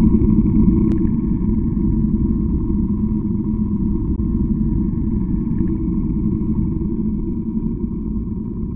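One channel of this everyday-sound recording runs late by a long buffer from 0.92 s to the end, about 93 ms behind, which fits a 4096-sample buffer. Once summed to mono, this channel delay produces doubling: every sound is followed by a separate slap echo at equal level. At 4.16 to 4.18 s, a likely Bluetooth dropout, with audio packets missing their deadline to the headphones, cuts the output to silence. The sound then resumes further along, as though it had kept playing through the gap.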